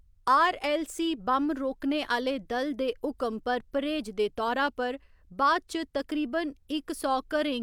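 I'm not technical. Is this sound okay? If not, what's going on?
Yes, this sound is okay, and nothing is going on with it that needs fixing.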